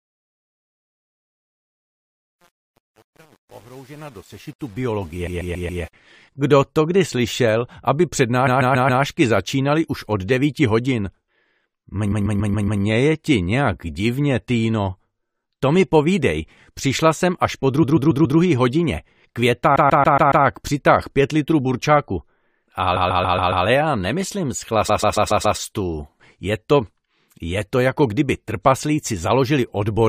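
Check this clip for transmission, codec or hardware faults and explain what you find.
Two faults are present: truncation distortion on the opening fade, and a recurring stutter from repeated frames.

Truncation distortion on a fade runs from 0.0 to 5.93 s, worst from 0.0 to 5.11 s. The gain stage keeps too few bits and adds no dither, which fits an 8-bit path. At low level the waveform collapses into a few coarse steps. So the quiet start sounds gritty.

Repeated frames occur seven times, starting at 5.26, 8.46, 12.11, 17.82, 19.75, 22.95 and 24.88 s. Each time, a 139.3 ms block plays again, which fits a run of about six short codec frames resent or rewritten. It repeats four or five extra times, adding 0.56 or 0.70 s. You hear a rapid mechanical stutter.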